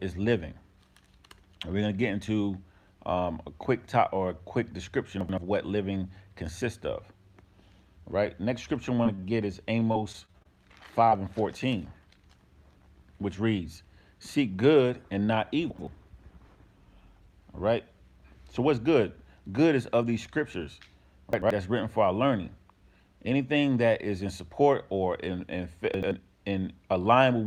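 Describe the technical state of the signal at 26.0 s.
Chunks out of order, 25.94 to 26.11 s: one 85 ms chunk arrives a chunk late and plays after its successor, leaving a brief jumbled moment.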